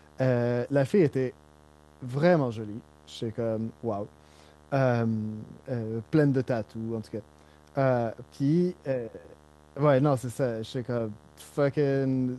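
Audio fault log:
throughout, video or display buzz: a steady 75 Hz buzz with harmonic hash above it sits under the speech, roughly 30 dB below it. A display or video cable is coupling its field-rate refresh signal into the audio path, so the buzz follows the picture timing.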